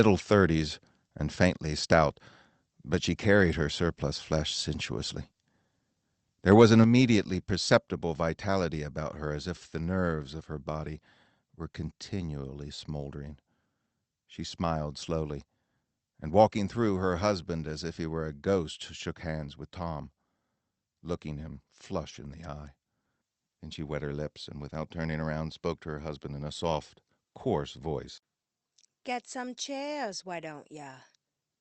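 A harsh, crackling edge cuts into the loudest syllables of this speech recording between 6.51 and 6.82 s, where peaks push about 3 dB past the converter's limit and around one percent of samples are flattened. That is microphone overload, most likely from input volume set too high for the converter. At 6.84 s the voice and background drop together by about 4 dB in a single step, a microphone volume stepped down event, likely as the call software reacted to the clipped peak and lowered the input level.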